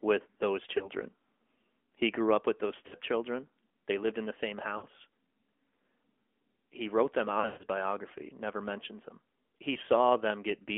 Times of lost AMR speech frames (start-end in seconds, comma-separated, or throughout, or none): 0.78-0.89, 2.88-2.95, 4.78-4.86, 7.40-7.66, 9.74-9.78